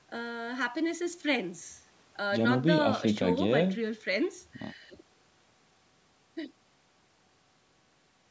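Nothing stood out on listening to this speech recording, which has passed through a call's microphone processing with its usual trimming of the lowest bass and no content above about 8 kHz.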